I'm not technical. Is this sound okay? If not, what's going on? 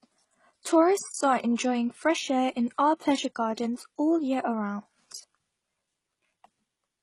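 No, the speech sounds dull and smeary all the way through, with nothing above 12.1 kHz. That's likely transcoding between lossy codecs, where each compression stage piles its damage on the last.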